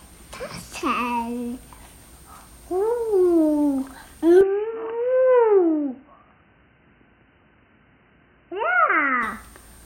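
An everyday-sound recording that turns dull and boxy at 4.41 s, with nothing above 3 kHz, a level drop of around 5 dB and a faint new noise floor. It clears at 9.23 s. The likely cause is an input switched to a poorer device, not a simple filter, because tone, level and noise all change together.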